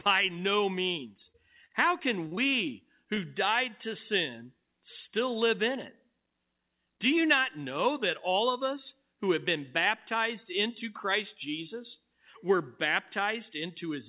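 From 1.32 to 2.39 s there's repeated packet loss, the robotic-sounding kind. Five gaps land close together, the longest around 42 ms, and each gets patched by stretching the last bit of speech, so that stretch turns choppy.

Then at 3.15 to 3.19 s there's a short concealed packet loss: roughly 20 ms never arrived in time, and the receiver bridged it by extending what came just before. You hear it as a quick smear or wobble rather than a clean dropout, over a band that stops at 4 kHz, which fits a narrowband G.711-style call codec.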